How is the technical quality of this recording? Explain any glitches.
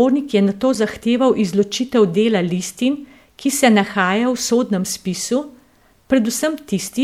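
One glitch stands out in the speech. Damaged data in a compressed stream appears at 0.74 to 0.77 s, between "je nato" and "zahteval izločitev dela listin". Corrupted bytes made the decoder misread frames and lose sync, so it searched for the next valid frame header. This produces a brief blip of about 24 ms.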